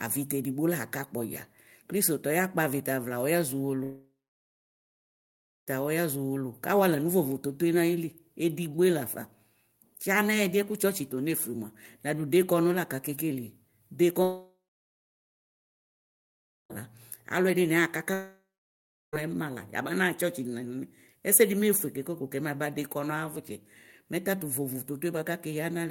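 At 3.83–5.70 s, 14.23–16.73 s and 18.14–19.16 s, speech collapses into a fading buzz, then silence, and resumes later with material skipped. That fits a likely long network dropout rather than a simple mute.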